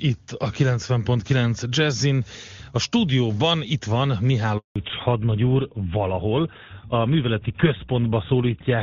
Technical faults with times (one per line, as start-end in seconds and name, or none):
4.58-4.76 handover gap
4.76-8.82 fallback to narrowband